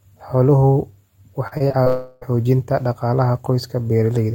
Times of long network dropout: 1.88-2.23

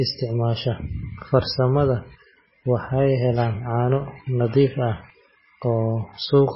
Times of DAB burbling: none

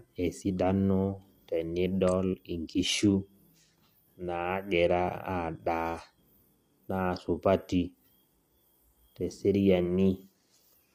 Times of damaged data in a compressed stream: none

